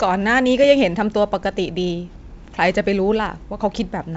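No technical faults can be heard anywhere in the speech. It comes over G.722 wideband telephone coding at 64 kbit/s, so nothing reaches above 7.7 kHz and the coding leaves at most a faint trace on the sound.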